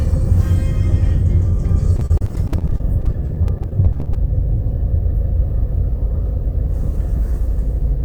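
A recording of everyday sounds with two network-playback faults. From 1.96 to 4.15 s there is repeated packet loss, heard as a robotic sound: dozens of short dropouts, none longer than 34 ms, each patched by stretching the preceding audio. About a fifth of that span is concealment rather than real signal, and the patching fills 452 ms in all. Because the repeated fragments come one after another, the sound turns choppy, with small pieces missing. From 5.92 to 7.85 s there is a jitter buffer speed-up. The receiver had more audio queued than it wanted, so it cut out short pitch-period-length slices, around 50 ms altogether, to reduce the delay. Playback runs at 103% of normal speed with the pitch unchanged.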